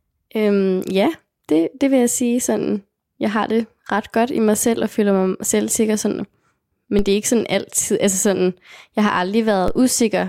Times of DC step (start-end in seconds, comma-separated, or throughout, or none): 6.99, 9.68